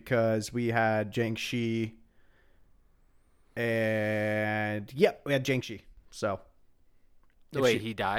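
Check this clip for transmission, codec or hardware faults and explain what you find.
One fault is present: a sudden gain jump from 5.61 to 5.97 s, just after "and yep we had". The speech and background noise drop together by about 6 dB, then return, likely a digital gain step applied between adjacent samples without any ramp.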